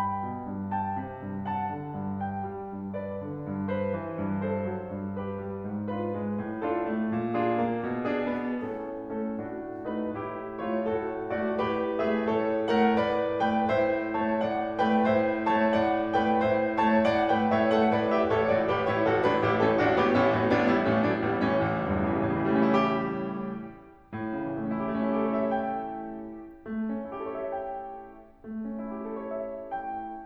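A music clip with no technical faults to report.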